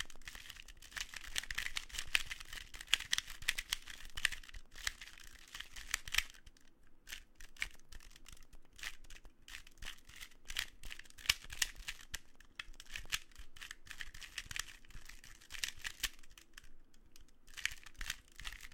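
From 0.06 s to 13.06 s there are periodic USB or driver dropouts. Every 0.1 s, a tiny slice of audio goes missing and is replaced by silence. Each gap lasts roughly half a millisecond, and there are more than a hundred of them. Something blocks the USB bus or the audio driver at a fixed interval. The result is an even ten-per-second ticking, heard only where the sound has signal.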